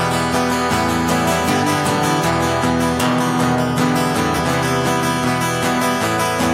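Right at 4.38 s there's a quick blip, over almost as soon as it starts. That's damaged data in a compressed stream: a bit of the encoded file got corrupted, so the decoder hit frames it couldn't make sense of. It either misdecoded them or threw them out, lost its place in the stream, and had to hunt for the next valid frame header before it could get back on track. That resync is the short glitch you hear.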